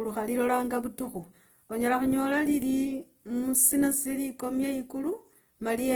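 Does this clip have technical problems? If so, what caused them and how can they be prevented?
Yes. Throughout the speech there is plainly audible Opus compression damage, most likely from encoding at too low a bitrate; the graininess fits roughly 16 kbps in the music (CELT) mode. The codec keeps each band's energy but fills starved bands with folded or noise content, so the voice turns rough, noisy and grainy rather than swirling like MP3. The bandwidth stays full, reaching about 20.2 kHz, which separates this from low-rate muffling. Encoding at a higher bitrate would prevent it.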